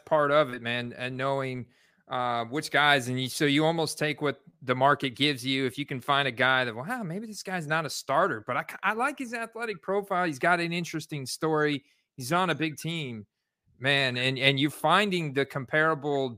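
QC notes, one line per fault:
No faults found.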